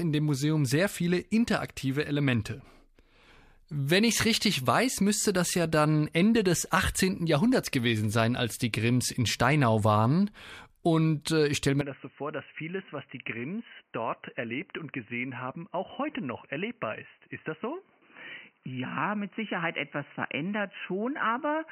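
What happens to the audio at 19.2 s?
At 19.2 s the speech is still in the dull, boxy stretch that began at 11.81 s, just after "äh ich stelle", and runs to the end; the input was likely switched to a poorer device. Nothing passes above 3 kHz, the level falls by about 10 dB, and a new faint noise floor appears, with no gap at the switch. That combination sets it apart from a plain low-pass filter.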